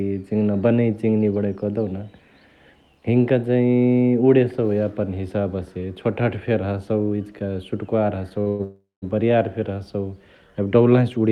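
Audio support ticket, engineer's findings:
Short stall from a late packet, 8.41 to 8.48 s: last sound held about 49 ms with a slight buzz. Jitter buffer ran dry waiting on one packet; playback resumed at the same spot, so nothing lost, just 49 ms added delay.

Call audio freeze, two hits: 8.48 to 8.61 s (108 ms of held, buzzy sound) and 8.63 to 9.04 s (389 ms, tail fading to silence for roughly the last 170 ms). Likely packets stuck in transit emptying the jitter buffer. Nothing missing; the audio just runs later afterward.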